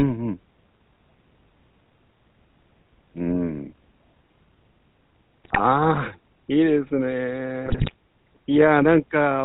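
Throughout, the GSM full-rate codec leaves the speech buzzy and gravelly, and the spectrogram shows an empty band above 4 kHz, which fits a 13 kbps GSM full-rate stream. From 5.44 to 5.61 s and again from 7.66 to 7.94 s, GSM bit errors corrupt the decoded frames, producing squawks and gargling that appear as sudden level spikes and smeared, distorted spectral blocks.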